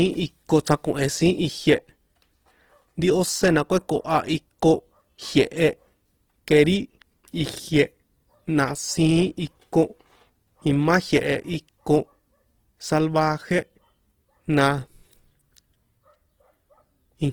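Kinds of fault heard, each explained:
Opus compression: The speech was likely passed through an Opus encoder in its CELT music mode at a low rate, consistent with about 16 kbps. Starved bands are filled by folding or noise, so the fullband sound, reaching near 20 kHz, turns plainly grainy and rough.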